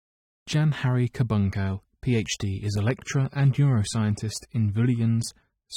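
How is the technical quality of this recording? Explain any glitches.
The quality drops partway through. From 1.41 s to the end, the speech suddenly turns grainier, with swirly codec artefacts, but no gap. This is an adaptive stream at a lower bitrate. The connection apparently slowed, so the player switched versions mid-stream, which fits a step down from 96 to 24 kbit/s.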